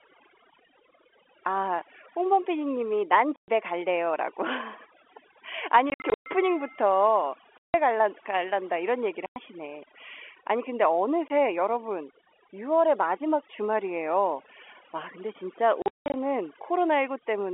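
Overdone noise removal runs through the whole clip. The background sits near silent, with twinkling specks where single bands flicker on and off. Quiet parts of the speech get pulled down with the noise.

Packet loss filled with silence breaks the speech six times. The gaps fall at 3.36 to 3.48 s, 5.90 to 6.26 s, 7.59 to 7.74 s, 9.26 to 9.36 s, 11.28 to 11.30 s and 15.82 to 16.14 s. They run from 20 ms to 180 ms, which fits 20 ms packets. The holes at 5.90 s and 15.82 s are broken runs. Each hole starts and stops with a hard edge. The telephone-band sound of the G.711 line carries underneath.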